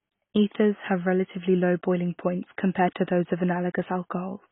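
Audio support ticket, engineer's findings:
Likely AAC compression (AAC-LC) at a very low bitrate, consistent with about 16 kbps. Encoder drops all content above 3.8 kHz and coarsely quantises the rest. Speech dull and band-limited throughout, with heavy smearing and warbly, fizzy texture on sustained sounds and sibilants.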